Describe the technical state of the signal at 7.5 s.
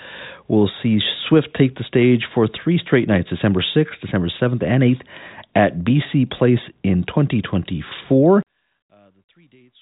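At 7.5 s the speech is intact, carried over G.726 ADPCM at 40 kbit/s, so nothing above about 3.8 kHz comes through and the coding leaves at most a faint trace.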